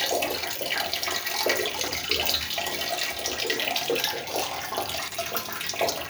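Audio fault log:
1.80–1.92 s and 5.08–5.16 s, chunks out of order: in each spot, a 40 ms block of audio plays late, two blocks behind its place in the first case and one block behind in the second. The sound briefly jumbles, with three hard joins. Unlike a dropout, no audio goes missing, and unlike a stutter, nothing repeats. The same material is simply shuffled, which fits a 40 ms buffering or write scheme.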